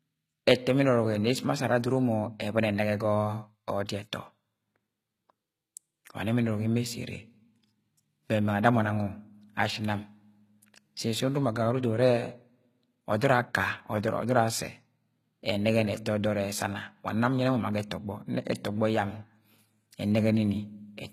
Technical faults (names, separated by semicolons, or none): HE-AAC compression